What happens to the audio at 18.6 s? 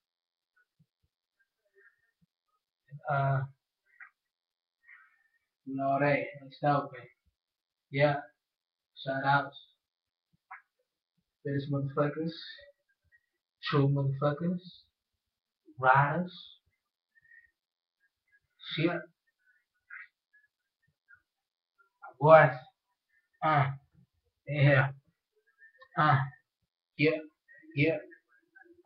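Nothing goes wrong at 18.6 s; the audio plays through that moment intact, with no dropout, click or other fault.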